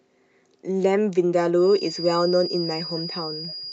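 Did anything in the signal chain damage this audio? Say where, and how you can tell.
Yes. From 1.55 s to the end of the clip, a thin, steady whistle at 4.9 kHz sits roughly 10 dB below the speech, swelling and fading slowly in level. This is a feedback whistle, likely from an acoustic loop between loudspeaker and microphone held just at the edge of feedback, so one frequency rings on without building up.

At 3.48 to 3.55 s a faint, brief repeat of the speech appears, lagging 207 ms and sitting far below it, around 30 dB down. This is an echo leak, likely where the far end's echo canceller missed part of its loudspeaker output and sent that residue back into the call.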